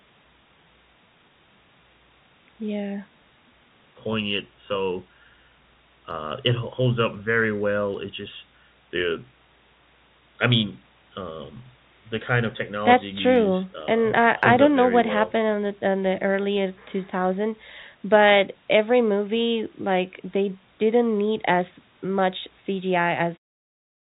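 No faults found: the speech carries the band limit of a call path, with nothing above 4 kHz, consistent with G.711 mu-law at 64 kbps, and ends on an editor's smooth fade-out at about 23.4 s.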